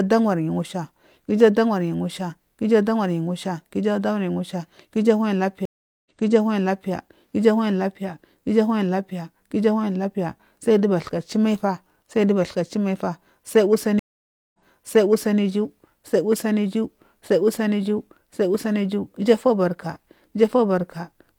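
At 5.65 s the speech drops out for about 0.40 s, and again at 13.99 s for about 0.55 s. Both are stream reconnects: the connection broke, the player restarted its decoder, and the server resent a burst, so each time playback resumes about 0.85 s earlier and that stretch of speech is heard twice, entering softly as the first frames fade in. On a waveform or spectrogram each shows as a flat, empty gap followed by a repeat of the pattern just before it.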